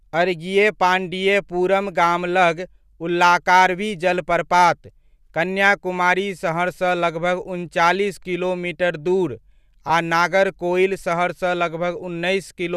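At 9.88 to 9.90 s, just after "उनचालीस किलोमीटर दूर", lost LE Audio frames cause a brief glitch. About 15 ms drops out, which fits two 7.5 ms frames. The decoder fills the gap by reusing the last spectrum with random signs. It sounds like a short noisy smear.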